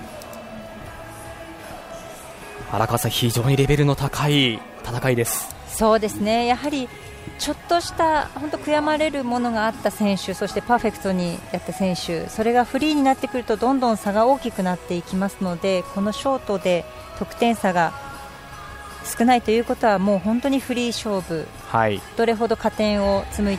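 No technical faults can be heard anywhere in the audio.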